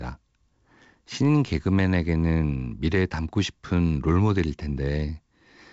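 No technical faults can be heard anywhere in the recording. The speech comes over a working G.722 wideband telephone path at 56 kbit/s, with nothing above about 7.7 kHz and a light hiss from the coding that is typical of that rate.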